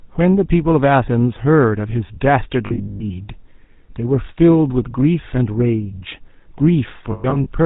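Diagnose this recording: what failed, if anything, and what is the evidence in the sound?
The codec stage failed. The speech has a buzzy, gravelly roughness from start to finish, and nothing comes through above 4 kHz. That points to the GSM full-rate codec, and the damage is plainly audible, which fits a 13 kbps channel. The codec models the vocal tract and drives it with a sparse, regularly spaced pulse excitation. That coarse excitation is what turns the voice rough.

The network stage also failed. There are lost GSM frames between 2.66 and 3.11 s, and again between 7.12 and 7.47 s. In the first stretch, about 260 ms of audio is missing, scattered across 440 ms. In the second, about 180 ms is missing across 340 ms. The longest gaps run to about a tenth of a second. Each gap is filled by repeating the last good frame, so the sound hangs as a rough, metallic ring.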